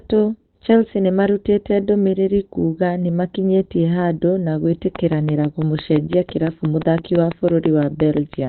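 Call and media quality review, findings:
Opus compression, whole clip: speech muffled and hoarse, heavily degraded, nothing above 4.2 kHz. Likely Opus speech (SILK) mode, narrowband, consistent with roughly 12 kbps.

Train of clicks, 4.96 to 8.35 s: regular ticking at 5.9 per second, around twenty clicks peaking about 15 dB above the speech. Likely pulse interference from nearby equipment or a faulty connection.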